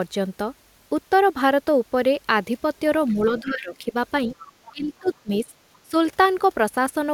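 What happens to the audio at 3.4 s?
At 3.39 s a faint trace of the other side's voice leaking through appears and lasts until 3.51 s. It sits well below the talker, around 25 dB down, as a brief fragment rather than a clear second voice. This is likely residual echo. The far end is playing from the talker's loudspeaker, and the echo canceller has not fully removed it from the microphone signal before transmission.

Overlapping this, from 3.41 s to 3.94 s, the talker's own level sags in speech suppressed in double talk. The deepest dip is roughly 15 dB, and about half a second of speech is affected in total. The likely cause is that both ends were active at once. The canceller could not separate near-end speech from the loudspeaker echo, so it attenuated everything in that window.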